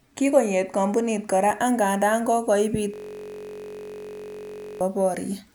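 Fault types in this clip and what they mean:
System hang loop: the system or driver stalled while the audio hardware kept replaying one ring buffer, a 21.33 ms piece that fits a 1024-sample buffer. After "kompunit kora angandan kokoiibit", from 2.94 s to 4.81 s, the speech becomes a steady 46.9 Hz buzz.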